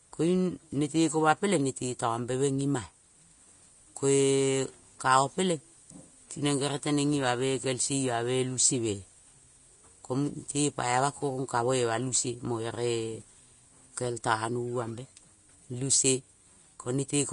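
From start to finish the speech has a grainy, hissy sheen, with nothing above about 10.6 kHz. The likely cause is Vorbis compression at a low setting, which fits a bitrate near 34 kbps. Vorbis spends too few bits on the treble, so fine detail there turns into coarse noise of similar energy, roughening vowels and smearing consonant onsets. A plain low-pass filter would dull the top without that added grit, and MP3 tends toward watery warbling rather than hiss.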